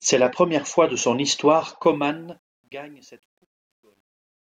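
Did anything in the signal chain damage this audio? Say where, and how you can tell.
Yes. Truncation distortion on a fade sets in after "fois de son histoire", from 1.84 s to the end at 4.59 s. It is worst from 2.77 s, where the tail turns gritty, which fits a fade stage rounding to about 10 bits without dither.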